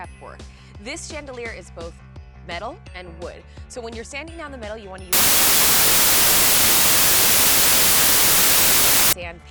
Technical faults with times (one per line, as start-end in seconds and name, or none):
5.13-9.13 samples built from the wrong bytes